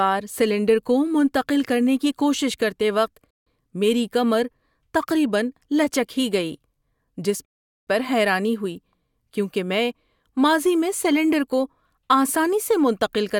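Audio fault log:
3.31 to 3.47 s and 7.45 to 7.87 s, rebuffering stall: the playback simply runs dry and goes silent, first for about 0.16 s right after "کی کوشش کرتے وقت", then for about 0.42 s just before "پر حیرانی ہوئی کیونکہ". Each time the speech picks up exactly where it stopped, with nothing skipped, because the player was waiting on downloaded audio rather than dropping any. You just get dead air stretching the clip.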